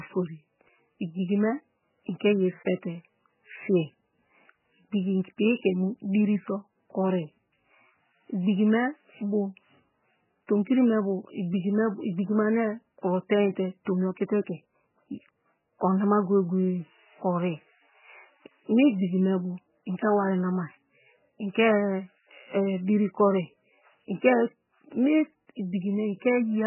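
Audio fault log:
throughout: MP3 compression. The encoder was likely starved of bits, with heavy damage of a kind that fits a bitrate around 8 kbps. It cut the treble off entirely, leaving nothing above 3 kHz, so the speech sounds dull and muffled. It also dropped weaker frequency components that come and go from frame to frame, giving a watery, swirling texture. Consonant attacks smear rather than landing crisply.
13.85 s: pre-echo. The codec spread its quantisation noise across a whole transform block, and a sharp attack fell late in that block. Noise scaled for the loud onset leaked into the quiet stretch ahead of it, about 16 ms wide. Between "kuro tenite" and "tomi okite ke" a brief hiss runs just ahead of the attack, and the onset sounds softened and smeared instead of clean.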